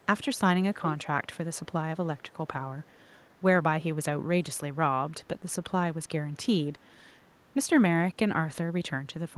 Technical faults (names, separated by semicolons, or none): echo leak